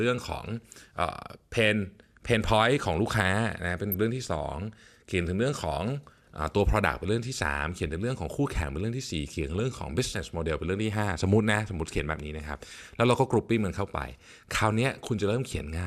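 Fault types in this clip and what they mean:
DAB burbling: weak-signal bit errors slip past error correction into the MP2 data, giving a few quick watery blips over the speech around 3.9 and 9.6 s.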